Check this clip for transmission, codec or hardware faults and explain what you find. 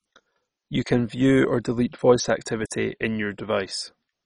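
One codec fault runs through the whole clip. The speech has a hard ceiling with nothing above 10.4 kHz and carries heavy gurgling, granular distortion from start to finish, the signature of MP2 compression. The cause is likely MPEG Layer II at a low rate, which fits something around 32 kbps. Short of bits, the encoder switches off whole upper sub-bands, lets others flicker in and out, and quantises the remainder coarsely, leaving the sound dull and watery.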